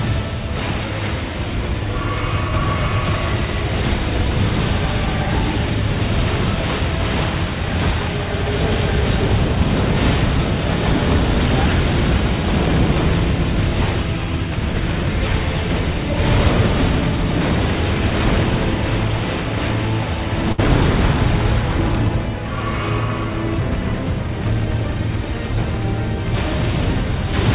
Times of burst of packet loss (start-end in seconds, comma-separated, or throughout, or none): 20.52-20.60